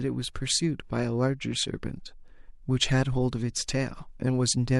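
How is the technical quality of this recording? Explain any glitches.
There is one audible codec fault in this speech recording, a brief pre-echo at about 0.34 s. A hiss of roughly 19 ms arrives just ahead of a sharp onset, about 14 dB above the quiet floor, and the attack itself sounds blurred. The transform block was too long for the transient, which points to a coder that never switched to short blocks, and its quantisation noise filled the silent stretch before the attack. A spectrogram would show a thin vertical smear of broadband energy leading the onset, and the waveform would show low-level fuzz before the attack's first peak.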